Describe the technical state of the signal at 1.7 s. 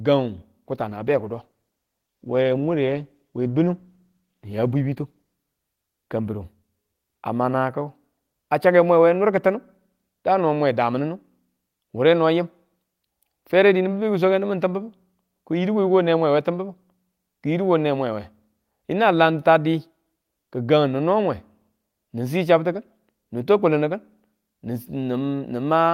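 At 1.7 s the signal is inside a call bitrate drop running from 0.71 to 5.41 s: the encoder, told to spend far fewer bits, codes the speech coarsely and trims high frequencies, which fits a fall from around 40 to 16 kbps. The sound is rough and muffled but continuous, without the dropouts or glitches of packet loss, and it clears once the rate recovers.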